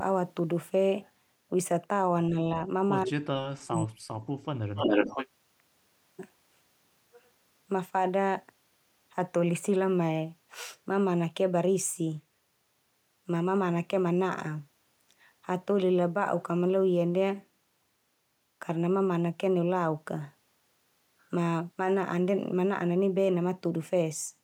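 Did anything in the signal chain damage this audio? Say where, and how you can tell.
Yes. The whole clip carries a DC offset: the waveform sits shifted off zero by a constant amount from start to finish. You cannot hear it as such, but it shows as a steady component at the very bottom of the spectrum and eats into headroom on one polarity. That points to the analogue front end or converter stage, where a bias reaches the signal before digitisation and no high-pass stage removes it.

Two stretches of speech suppressed in double talk appear, from call processing. At 2.30 to 2.36 s the level dips briefly by a few decibels, around 70 ms in all. From 3.05 to 4.07 s it drops hard, by roughly 40 dB, for about a second, so the talker nearly vanishes. The likely cause is an echo canceller that could not tell near-end speech from loudspeaker echo while both sides talked, and so attenuated everything.

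An echo leak follows, also in call processing, from 4.75 to 5.27 s. A copy of the speech returns 278 ms behind the original at roughly the same level, so it is clearly audible as a second, delayed voice rather than a faint tail. This is likely a far-end loudspeaker setup whose echo canceller failed to remove what its microphone picked up and sent that residue back down the line.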